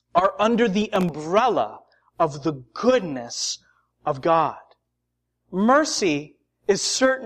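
From 0.82 to 1.09 s, just after "are under", the overloaded processor misses a handful of tiny buffers, leaving silent gaps heard as processor overload crackle.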